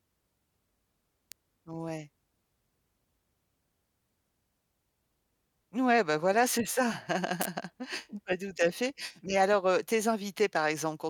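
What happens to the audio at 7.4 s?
Right after "ben voilà c'est ça", from 7.41 to 7.45 s, there's a sharp snap, an electrical switching spike, likely a nearby switch arcing into the line, peaking around -10 dBFS.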